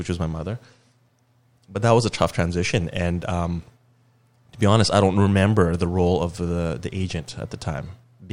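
No technical faults can be heard anywhere in the speech recording: there are no dropouts, level jumps or other disturbances at any point.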